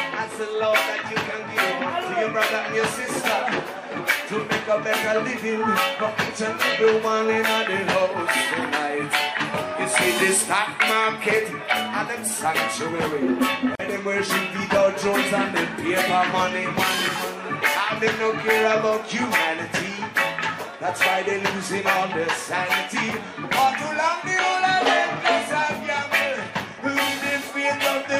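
A gap at a join of encoded pieces opens from 13.75 to 13.79 s: a gap of about 41 ms where separately encoded pieces meet with their padding untrimmed. Unlike a dropout, nothing is lost; the audio resumes exactly where it stopped, with smeared edges.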